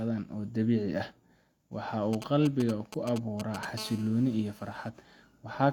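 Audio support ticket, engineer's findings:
GSM signalling bursts, 2.13 to 3.65 s: galloping ticks and brief 217 Hz buzz, roughly 10 dB under speech. Nearby 2G handset rectified by audio circuitry. Spectrogram: clustered broadband vertical stripes.

GSM phone buzz, 3.78 to 4.89 s: steady raspy 217 Hz buzz, about 20 dB below speech, handset in call. Spectrogram: dense harmonic comb; waveform: regular pulse train.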